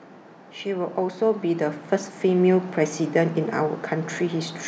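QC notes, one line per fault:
0.63–3.04 s, automatic gain rising: the gain control in the capture chain judged the input too quiet and pushed its gain up steadily, by about 8 dB over roughly two and a half seconds. Because the boost acts on everything the microphone picks up, the speech and the background noise floor swell together rather than the voice alone getting louder, so the room seems to creep closer as the level climbs across that span.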